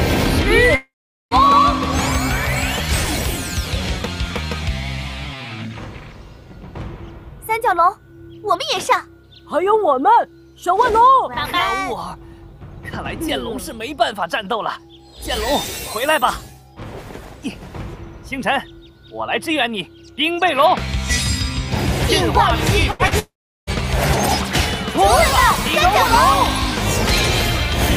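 At 0.75 s the sound trails off into a brief fading buzz or hiss, then falls silent for about 0.42 s before resuming at 1.34 s, with roughly 0.56 s of material gone. This is a long network dropout, likely caused by no audio arriving for that stretch. The receiver stretched the last sound briefly, then had nothing left to play, so the audio picks up further along instead of where it stopped.

From 22.91 to 23.02 s the sound is held as a short, decaying tail before the audio resumes. This is a burst of packet loss: about 80 ms of audio never arrived in time. The receiver extended the last sound while turning it down, then jumped ahead, so that 80 ms is simply missing.

Just after, between 23.07 and 23.14 s, there is a quick smear or wobble lasting only a few hundredths of a second. This is a short concealed packet loss. About 40 ms failed to reach the decoder, and the receiver patched the gap by continuing the preceding sound and blending back into the real signal, so the join is soft rather than a hard cut.

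The cluster ends with a second long network dropout from 23.19 to 23.70 s. A fading tail gives way to about 0.37 s of silence, and roughly 0.48 s of audio is skipped before the sound returns. The cause is likely the same kind of sustained delivery gap.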